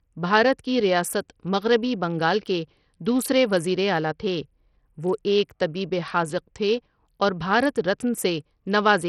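A speech clip with heavy coding damage from start to finish. The sound is likely passed through Bluetooth SBC compression. Nothing is left above 14.7 kHz. Below that, the treble flickers and drops in and out. A gritty noise and aliasing ride on the sound. SBC splits the signal into a few wide bands without a hearing model. At a low bit pool, perhaps near 64 kbps, the weak top bands starve and the rest quantise coarsely.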